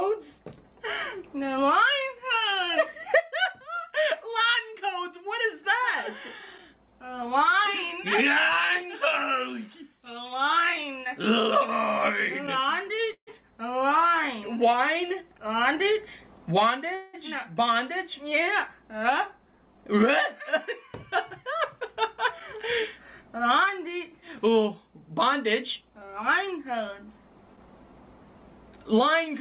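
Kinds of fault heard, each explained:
Call audio freeze: packets were likely held up, so the receiver stretched the last sound into a fading buzz or hiss for about 148 and 184 ms; spectrograms show smeared, decaying bands, the first ending in roughly 70 ms of flat silence.
Jitter buffer speed-up: excess buffered audio was trimmed by cutting pitch-period slices, running at 103% and 105% with unchanged pitch; waveforms show fewer periodic cycles, each of unchanged length, without gaps.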